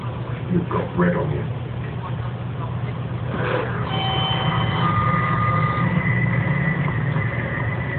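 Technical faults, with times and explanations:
No technical faults are audible anywhere in the audio.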